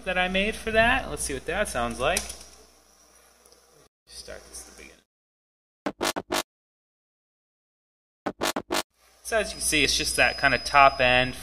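A feedback whistle enters at 9.43 s and runs to the end of the clip. It is a thin, steady tone at 5 kHz, well below the main sound and swelling and fading slowly in level. The likely cause is a loudspeaker-to-microphone loop held just at the edge of feedback.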